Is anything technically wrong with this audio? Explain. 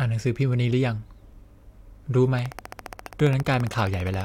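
Yes, there are two faults.

At about 1.33 s there is an overlap between stream segments. Two segments' timestamps collided, and the player trimmed a few milliseconds of speech that had never actually been doubled. The waveform jumps, producing one brief skip. It is a single event, not a repeating pattern, and a little audio goes missing.

From 2.39 s to 4.22 s a train of clicks runs at a steady 14.8 per second, around thirty of them. They peak roughly 5 dB above the speech. Their likely cause is electrical interference or a faulty connection. They tick evenly, with matching shapes.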